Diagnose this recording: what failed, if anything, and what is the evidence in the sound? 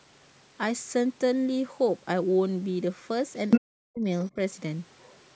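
Other side's voice leaking through, at the call-processing stage: a short burst of the far-end voice at 3.5 to 3.6 s, louder than the talker, and a faint trace at 4.99 to 5.24 s. The likely cause is residual loudspeaker echo that the echo canceller failed to subtract.

Speech suppressed in double talk, also in call processing: the talker's level collapses by about 40 dB from 3.58 to 4.06 s, right after the leaked burst, then dips slightly again at 4.3 to 4.38 s. The likely cause is the canceller attenuating both voices while they overlapped.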